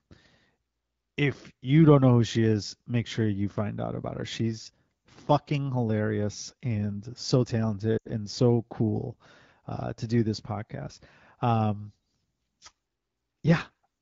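From 7.98 to 8.08 s, just after "fucking hilarious and so", lost AMR speech frames: corrupted frames were concealed by extrapolation, so about 80 ms of speech fades to near silence before "and so cool uh", against clear AMR-WB sound.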